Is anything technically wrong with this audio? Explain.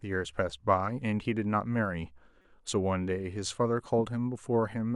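Yes. At 2.42 to 2.45 s there is a corrupt frame decoded: damaged bits in the compressed stream, which points to roughly two frames, were decoded anyway, so energy landed at the wrong frequencies. The result is a brief, faint chirp, squeak, blip or burst of noise in the speech, peaking very low, around -50 dBFS.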